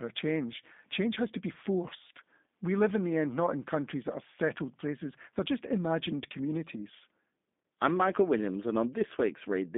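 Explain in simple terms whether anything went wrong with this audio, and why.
Yes, something went wrong: the speech has been squeezed through a phone-call codec, and it sounds like G.729, likely the lighter G.729A version. From start to finish the voice is confined to a narrow telephone band, roughly 200 Hz to 3.7 kHz, so it sounds thin and boxy. The codec also rebuilds speech from a rough model of the throat plus a few pulses, which leaves a plainly audible rough, slightly robotic edge.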